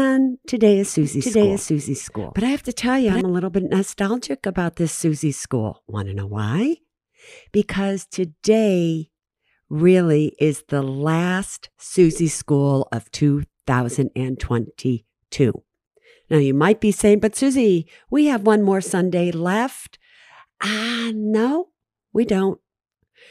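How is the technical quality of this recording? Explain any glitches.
The recording has one clear glitch, a doubled audio track from 1.03 to 3.21 s. A second capture path or an out-of-step edit likely mixed in a copy of the speech about 0.7 s late, at roughly equal level, so each phrase repeats as a dry, full-band echo that switches on and off abruptly.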